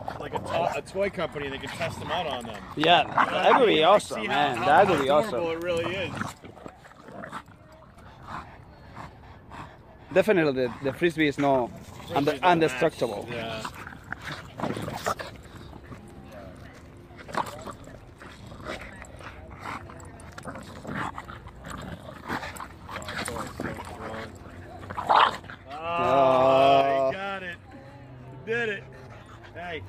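The audio abruptly drops by about 6 dB three times, from 6.32 to 7.97 s, from 21.95 to 22.29 s, and from 26.81 s to the end, recovering after the first two. This is likely one channel dropping out, halving the mono sum.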